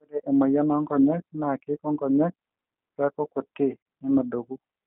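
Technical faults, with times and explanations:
Throughout, G.729 codec: the sound is squeezed into a narrow telephone band, roughly 200 Hz to 3.4 kHz, with plainly audible roughness and a slightly synthetic edge. That comes from rebuilding speech at 8 kbit/s out of a vocal tract filter, pitch predictor and a few pulses per frame.
3.82 to 3.86 s, VoIP packet loss concealed by the speech codec: about 40 ms goes missing, which fits two lost packets. The decoder stretches its last pitch and filter into a fading fill, and because each frame leans on the previous one, the sound stays weak and off for a moment afterwards.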